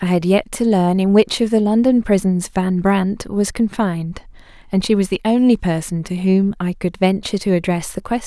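Nothing goes wrong anywhere in this bit of speech, so there's no technical fault to point out.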